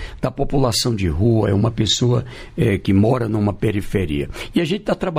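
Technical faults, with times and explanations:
Throughout, imaging from linear upsampling: the top end sounds a bit dull, and there's a faint metallic shimmer riding on the brightest, sharpest moments. That fits a 24 kHz source raised to 44.1 kHz by joining samples with straight lines. That interpolation filters poorly, so it softens the highs near 12 kHz and leaves a mirrored copy of the spectrum between 12 kHz and 24 kHz, roughly 35 dB below the signal.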